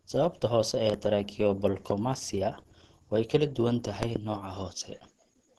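A speech recording with a muffled, hoarse, grainy character throughout and nothing above 12.1 kHz. This is likely Opus compression in its hybrid speech mode, at a rate that fits about 16 kbps. A spectrogram shows a hard ceiling at that frequency and smeared, noisy upper bands. Loud pops cut across the speech, which carries on beneath them: a double pop at 0.90 to 0.96 s, about 10 dB above the speech; a single pop at 1.90 to 1.93 s, about 15 dB up; and another double pop at 4.03 to 4.18 s, about 20 dB up. These are likely voltage transients from a plug, switch or static. On the waveform they appear as tall, narrow spikes, and on the spectrogram as thin full-height vertical lines.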